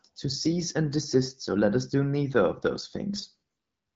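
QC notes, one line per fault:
3.15 to 3.35 s, AMR bit errors: for about 0.2 s the speech turns hoarse, scratchy and gargly, while pitch and level roughly hold. Around a tenth of the weakly protected bits in the AMR-WB frames arrive flipped, misplacing excitation pulses and fine spectral values.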